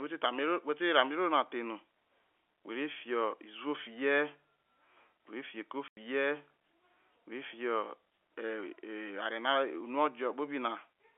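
A speech recording over a narrowband telephone line, with a sudden 90 ms hole of dead silence from 5.88 to 5.97 s, with hard edges. This is packet loss filled with silence: the receiver played nothing for the missing audio, which fits three 30 ms packets.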